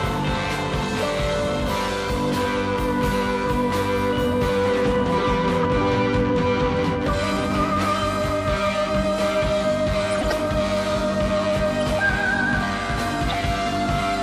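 Corrupt frames decoded occur at 5.63–5.66 s, 10.12–10.32 s (longest, several frames), 11.81–11.83 s and 13.30–13.35 s. The damaged compressed data was played anyway, putting energy at the wrong frequencies. Each is heard as a chirp or noise burst, unlike a silent dropout.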